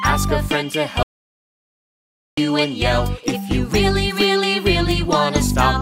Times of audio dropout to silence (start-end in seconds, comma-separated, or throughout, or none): 1.03-2.37